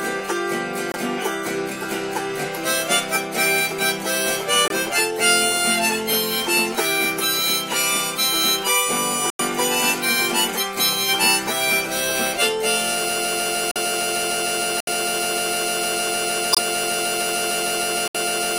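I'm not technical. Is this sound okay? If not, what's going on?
No. Corrupt frame muted: brief abrupt silences at 0.92, 4.68, 9.30, 13.71, 14.80, 16.53 and 18.08 s, where damaged chunks of the file were rejected and replaced with quiet.

Broken-record loop: from 13.09 s to the end, a 0.15-second scrap repeats about 36 times back to back, likely because playback stalled and kept resending its last piece.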